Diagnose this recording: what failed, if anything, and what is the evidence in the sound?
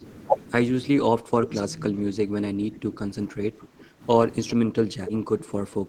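Speech suppressed in double talk, a call-processing fault, at 0.0–0.04 s, 1.19–1.55 s, 1.9–2.33 s, 2.53–4.03 s and from 4.67 s to the end. In each span the voice sinks in level: by roughly 5 dB in the first and third, about 15 dB in the second and fourth, and about 20 dB in the last. The likely cause is an echo canceller that, with both sides talking, could not tell this voice from loudspeaker echo and attenuated both.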